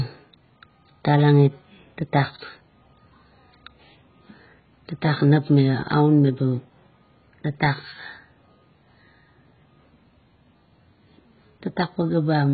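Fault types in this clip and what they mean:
AAC compression: throughout, speech sounds dull and smeared, with nothing above 4.5 kHz and warbling sibilants, likely from AAC-LC quantising coarsely at around 12 kbps.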